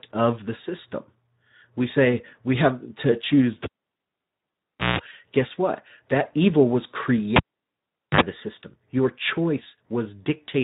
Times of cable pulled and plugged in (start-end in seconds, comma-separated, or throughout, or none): 3.63-4.99, 7.36-8.21